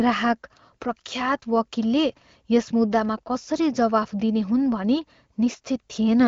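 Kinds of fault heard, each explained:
No faults are present in this speech. It passes through the AMR wideband (HD Voice) codec with only light coding traces, which fits one of that codec's higher bitrates, around 15.85 kbit/s.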